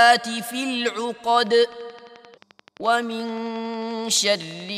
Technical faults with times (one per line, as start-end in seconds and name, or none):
1.47-4.70 train of clicks